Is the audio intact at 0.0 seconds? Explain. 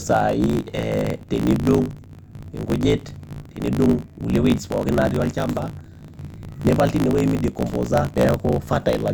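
No. Right from the start the speech has a swirly, hollow, smeared quality with blurred attacks. That's likely generation loss, from being run through a lossy AAC-style codec a few times, each pass adding fresh quantisation noise and spectral holes.

There's also a block size mismatch (truncated) throughout. Blocks that fit 1024 samples are being written but chopped short when read, so the tail of each is discarded. That gives a steady buzz at about 54.4 Hz, and the speech runs 1.16 times fast at roughly normal pitch.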